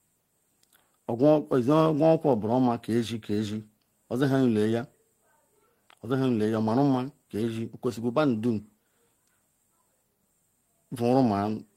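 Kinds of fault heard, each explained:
Listening to the speech closely, nothing stood out as a technical problem.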